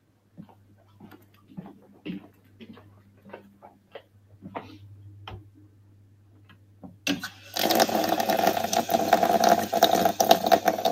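A noise suppressor applied to music or sounds runs through this whole sound recording. Built for speech, it treats sustained and fading material as noise, so its gain rides up and down by around 20 dB, leaving the ambience pumping and thinning while sharper onsets pass. Sound cut by the noise suppressor occurs at 0.00–0.38 s, 0.54–1.01 s, 1.18–1.51 s, 2.28–2.62 s, 2.85–3.27 s, 3.46–4.39 s and 5.43–7.06 s. In each stretch the suppressor dips the steadier content by about 7 to 8 dB, sinking its level and clipping decays short.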